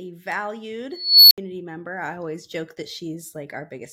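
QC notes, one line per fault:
0.91 to 1.38 s, unstable filter: a squeal around 4 kHz swells over 0.4 s, clips hard, then cuts to about 70 ms of silence as the recursive filter's runaway output overflows and resets. Unlike feedback howl, it ends in sudden silence.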